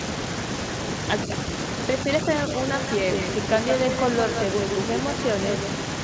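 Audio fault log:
1.26–1.30 s, speech suppressed in double talk: the voice dips by about 5 dB for roughly 40 ms, likely an echo canceller ducking the near talker during overlapping speech. The waveform shows a brief envelope pinch, and the spectrogram a faint vertical fade below the 8 kHz ceiling.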